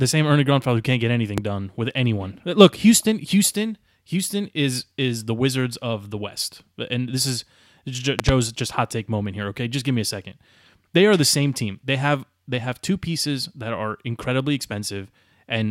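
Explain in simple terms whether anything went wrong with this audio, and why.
Loud pops cut into this speech twice. The first comes at 1.38 to 1.40 s, just after "who can't get" and before "done with anyone". It is a single sharp crack, far louder than the talking. The second, at 8.19 to 8.31 s, just before "just hot take moment", is a double pop and even stronger. Each pop sits on top of the speech, which carries on underneath. A sudden electrical jolt, likely from a plug, switch, static or driver glitch, caused them.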